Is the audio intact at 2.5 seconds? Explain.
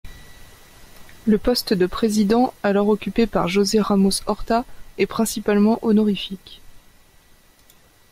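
Yes, at 2.5 seconds the speech plays through intact, with no dropout, click or other fault at that moment.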